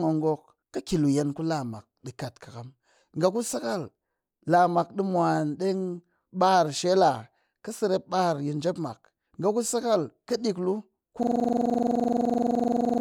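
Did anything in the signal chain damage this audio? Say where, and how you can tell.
Yes. At the driver or buffer stage, the system hung at 11.23 s while the audio hardware kept replaying the same ring buffer, a system hang loop that runs to the end of the clip. From 11.23 s on, the speech stops progressing and one 42.67 ms fragment repeats exactly, dozens of times, at about 23.4 Hz. That produces a rapid machine-gun stutter. The loop length fits a 2048-sample buffer.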